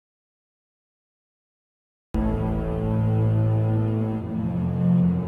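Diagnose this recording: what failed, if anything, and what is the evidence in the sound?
Audio dropout to silence from the very start until 2.15 s: the file opens in silence, with no hiss or room tone at all, and the sound only comes in at 2.15 s, already in mid-flow rather than fading up. The likely cause is a lost input, such as an unplugged device, a dropped link or a mute, while the recorder kept writing silence. Whatever happened during that stretch was never captured.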